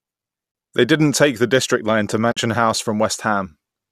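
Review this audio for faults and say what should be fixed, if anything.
AAC frame loss with muting occurs at 0.52 to 0.55 s and again at 2.32 to 2.37 s: short soft-edged dropouts of 30 ms and 50 ms, which fits about three and five lost 10 ms frames. The decoder zeroed the spectrum of the missing frames, and the overlapping transform windows fade the speech out and back in rather than cutting it. The light coding texture around them is likely from low-delay AAC. To prevent the gaps, protect the stream with forward error correction or retransmission, or use packet-loss concealment that extrapolates the signal instead of muting it.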